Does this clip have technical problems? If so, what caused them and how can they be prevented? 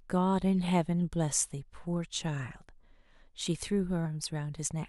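Yes. At 4.04 s, compressed frames are skipped. The speech jumps ahead by roughly a tenth of a second, a few 23.2 ms frames, with a smeared blip instead of a silent gap or sharp click. Prevent it by checking file integrity after transfer and re-encoding from an undamaged source.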